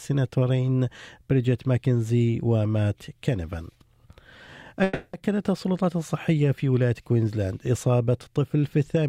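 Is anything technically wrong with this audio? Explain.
Yes. From 4.83 to 5.15 s there is a call audio freeze, likely from packets stalling in transit; the emptied jitter buffer stretches the last sound into a fading buzz for about 300 ms, then playback resumes intact, now running 300 ms late.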